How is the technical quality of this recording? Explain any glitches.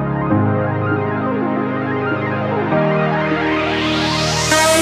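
The technical quality of this recording is good, and there are no glitches to explain.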